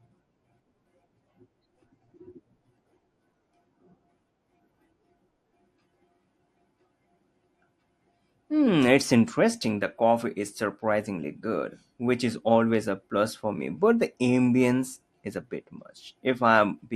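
From start to end, the speech sounds dull and gurgling, with a granular grit. Upper frequencies flicker in and out. This is likely MP2 compression at a rate consistent with 80 kbps. Starved of bits, whole upper sub-bands drop out, and the remaining bands are coarsely quantised.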